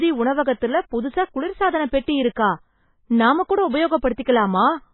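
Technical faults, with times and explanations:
Throughout, MP3 compression: speech cut off above 4 kHz, heavily watery and swirly, likely a bit-starved encoder zeroing weak lines, which fits about 16 kbps.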